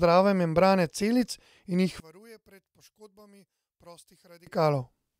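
One channel inverted, from 2.00 to 4.47 s: the speech abruptly falls by about 29 dB, leaving only a faint residue until the level comes back at 4.47 s. The likely cause is reversed polarity on one stereo channel. When the two channels are summed to mono, everything they share, including the centred voice, cancels almost entirely. What remains is just the small difference between the left and right signals, heard as a weak trace of the speech.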